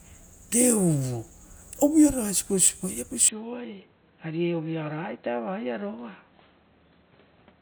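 Speech that abruptly turns dull and boxy at 3.28 s and stays that way to the end, most likely an input switched to a poorer device. A spectrogram shows everything above 4.1 kHz vanishing at that instant, with no gap, and a faint new noise floor. The waveform drops by roughly 10 dB.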